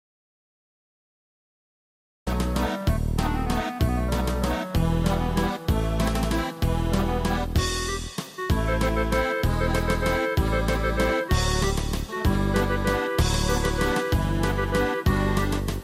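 The clip opens in an audio dropout to silence: from 0.00 s to about 2.27 s there is silence with no room tone, and the sound then enters abruptly mid-flow. The likely cause is lost input, such as a disconnected device or a stray mute, while the recorder kept writing silence.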